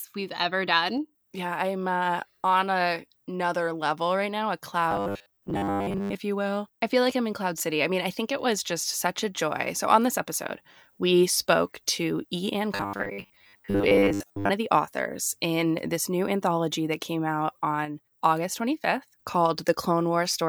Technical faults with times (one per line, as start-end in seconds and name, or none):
4.91-6.15 robotic sound from repeated short buffers
12.75-14.50 robotic sound from repeated short buffers